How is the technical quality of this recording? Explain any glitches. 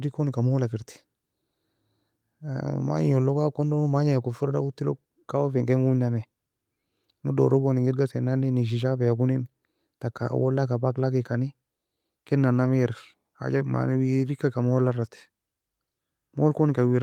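Nothing in the recording stood out as a technical problem on listening, so there are no glitches to explain.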